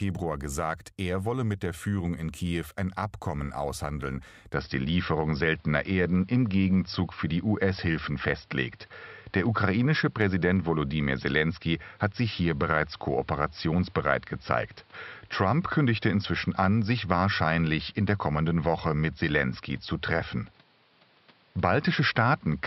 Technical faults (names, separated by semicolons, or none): input switched to a poorer device